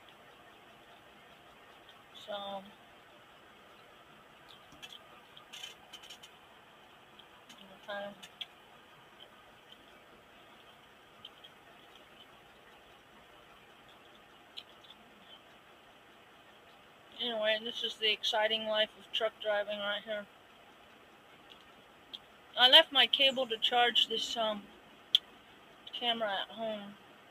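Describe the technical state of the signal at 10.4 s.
Right at 10.4 s you're hearing a noise suppressor applied to music or sounds, and it isn't local: it's active for the entire clip. A speech-tuned suppressor reads sustained tones, ambience and reverb as noise and pulls them down, letting attacks through. Here the gain swings by around 10 dB, so held material and decaying tails dip under the transients, giving a pumping, fluttery, thinned-out quality at that moment.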